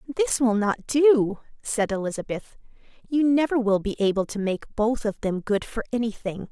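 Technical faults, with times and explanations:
No technical faults can be heard in this speech. Nothing in the audio calls for a timed entry or an explanation.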